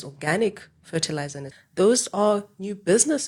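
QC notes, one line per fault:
1.47–1.52 s, damaged data in a compressed stream: right after "organic fertilizer in", about 50 ms of the speech is disrupted. Corrupted bytes in the coded stream lead the decoder to misread those frames and lose sync until it finds the next valid frame header.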